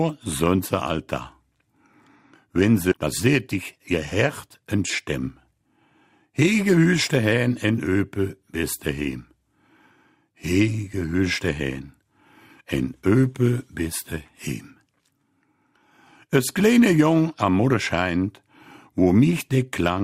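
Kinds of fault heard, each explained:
Skip ahead, 2.91 to 2.93 s: about a second of audio never reaches playback, apparently dropped so the stream could catch up with audio already waiting. The sound jumps straight forward with no filler, and the two sides are butted together almost directly.
Jitter buffer speed-up, 2.94 to 4.01 s, 4.47 to 5.66 s and 6.27 to 6.78 s: with too much audio queued, the receiver repeatedly cuts out short pitch-period pieces. The first stretch runs at 132% speed, losing roughly 300 ms; the later two run at 107%, keeping pitch but sounding hurried.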